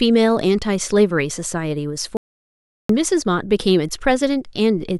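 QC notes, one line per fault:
2.17–2.89 s, audio dropout to silence: the input feed was likely lost for about 0.72 s, through a disconnect, failed link or stray mute, while recording carried on writing silence, so the speech cuts off mid-flow into silence with no room tone, then resumes abruptly.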